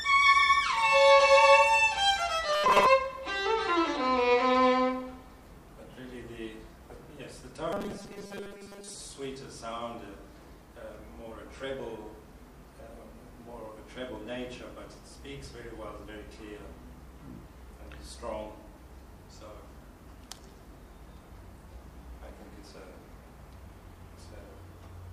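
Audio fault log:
2.47 to 2.86 s and 7.73 to 8.95 s, robotic sound from repeated short buffers: in both stretches the audio turns into a rigid, metallic buzz at 200 Hz that only roughly follows the underlying sound. The likely cause is new audio arriving too seldom, so a 5 ms piece is played over and over to fill the gap, replacing around 70 percent of the material. That fixed 5 ms repeat is what sets the 200 Hz buzz, and the skipped audio is simply lost.
5.47 s and 15.46 s, audio missing between chunks: at each of these points a few milliseconds of audio vanish and the material on either side is butted together with no silence, heard as a brief skip. The two points sit 10 s apart, which matches audio handled in 10 s chunks. The likely cause is a short piece being dropped each time one chunk is closed and the next one opened.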